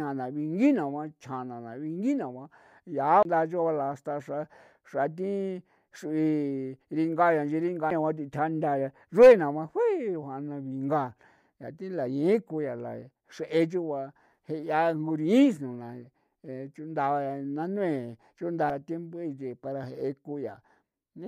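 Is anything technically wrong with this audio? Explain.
Yes. The speech has three CD skips: from 3.23 to 3.25 s, at 7.90 s and at 18.70 s. In each one, a knock or a flaw on the disc made the laser lose its place on the spiral track. The player muted briefly and resumed from a different turn. Each skip is heard as a short tick and a gap, about 30 ms at 3.23 s and only a few milliseconds at the other two. The speech then continues abruptly from a different point.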